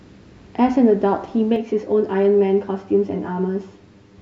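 From 1.56 s onward, channel delay (comb filtering): one channel lags roughly 10 ms, so the mono sum notches evenly from around 50 Hz, sounding hollow and phasey.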